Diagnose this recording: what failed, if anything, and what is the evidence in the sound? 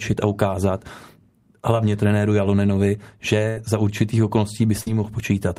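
Network stage: bursts of packet loss at 3.48–3.58 s, just before "za určitých", and 4.81–4.87 s, just after it. Each 60–80 ms gap was concealed by a fading continuation of the previous sound, then skipped.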